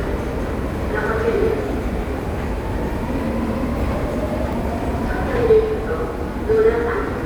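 A short recording of non-speech sound carries one fault, damaged data in a compressed stream, at 4.53 s. It is a very brief disruption of only a few milliseconds, heard as a momentary glitch in the sound. At that point, part of the encoded stream is corrupt, so the decoder cannot interpret the affected frame correctly, loses its place and has to resynchronise on the next valid frame header before normal playback resumes.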